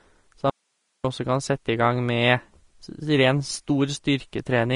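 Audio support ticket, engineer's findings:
Speech band-limited throughout, nothing above 10.5 kHz; hissy, grainy treble, roughened tones, smeared consonant onsets. Likely Vorbis compression at a low setting, consistent with roughly 35 kbps. Coarse residue quantisation turns fine high-frequency detail into noise-like grain.

Audio dropout to a faint residue, 0.50–1.04 s, about 0.54 s lost, abrupt cut and return just before "også kan sette". Gap holds only hiss, roughly 50 dB below programme level. Likely upstream signal loss with the downstream path left live.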